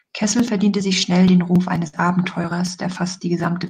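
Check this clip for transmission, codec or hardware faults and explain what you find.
One transmission fault: a single burst of packet loss partway through the speech.

From 1.87 to 1.96 s, a run of audio arrived too late or not at all. The receiver filled about 54 ms by repeating the last sound and fading it, so you hear a brief held buzz or hiss dying away, then speech resumes with about 60 ms gone. A spectrogram shows smeared, repeated harmonics thinning out, then an abrupt jump. The waveform shows a decaying repeated cycle before the cut.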